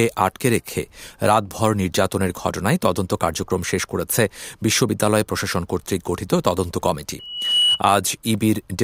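Near the end, from 7.19 to 7.81 s, there's a loudspeaker feedback squeal. The mic is picking up the speaker it's feeding, and around 2.9 kHz the loop gain tips past one, so that frequency keeps feeding itself. You hear a single thin tone creep in and swell over a bit under half a second until it sits roughly 5 dB above the speech, a sharp, piercing whistle riding on top of everything before it ends.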